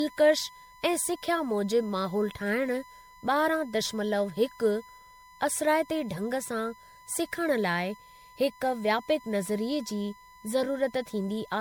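A steady whine at 1 kHz sits under the speech for the whole clip, about 25 dB below the voice. This is USB whine: the bus draws current in 1 ms frames, and that regular pulsing leaks into the audio through the power or ground path, giving a fixed tone at exactly the frame rate. Mains hum would sit at 50 or 60 Hz with its harmonics, and acoustic feedback would swell and shift with gain, so the locked 1 kHz pitch is what marks this as USB whine.

Throughout, the speech also sounds swirly, hollow and smeared, with consonant attacks blurred. This is generation loss, likely from the audio being run through MP3 at 96 kbit/s around seven times. Each pass quantises again on a shifted frame grid, so noise and spectral gaps pile up. The spectrum still extends to about 20.1 kHz, so the damage is not simple band-limiting. A single encode at that bitrate would sound cleaner, and the excess smearing points to repeated passes.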